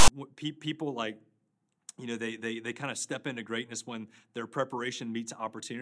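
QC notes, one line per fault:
0.00–0.08 s, file tags played as audio: the clip opens with a short, hard-edged burst of rasping static before the speech begins. A block of text tag data is being read as samples, and its byte values form a loud, buzzy waveform pushed off to one side of zero.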